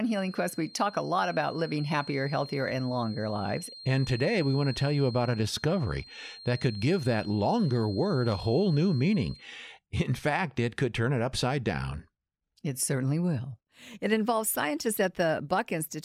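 From 0 to 9.5 s a faint 4.2 kHz feedback whistle sits under the speech, likely a loudspeaker-microphone loop near instability; unlike steady electrical tones, it wavers.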